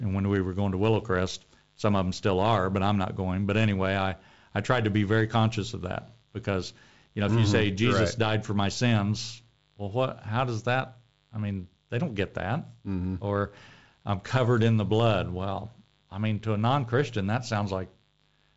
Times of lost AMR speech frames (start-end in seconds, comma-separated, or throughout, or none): none